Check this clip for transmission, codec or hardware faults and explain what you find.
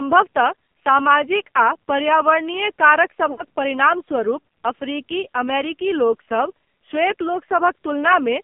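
Two faults: the whole clip went through the AMR narrowband mobile codec, and there's a short burst of lost AMR speech frames just after the three-second mark.

The AMR narrowband mobile codec affects the entire recording. The speech sits in a phone-line band of roughly 150 Hz to 3.4 kHz, with nothing in the upper range. The codec damage is heavy, and the buzzy, synthetic edge fits one of AMR-NB's low modes, around 5.9 kbps. At that rate the codec rebuilds the voice from a simple vocal-tract model fed by only a few pulses per short subframe, so the detail and natural texture are gone.

The lost AMR speech frames run from 3.32 to 3.43 s, about 60 ms of missing audio, which points to roughly three consecutive frames failing. The decoder covers the gap by repeating the last good pitch and vocal-tract settings while lowering the gain. You hear the sound smear and drag for an instant, then sag toward silence, and the voice comes back a bit weak or rough right afterwards.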